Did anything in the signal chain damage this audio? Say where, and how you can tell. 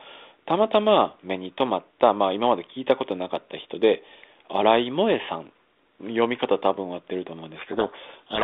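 Yes, at the codec. From 7.56 s to the end, the speech is buried in harsh distortion. This codec payload misread fits the G.726 code words being unpacked in reversed bit order.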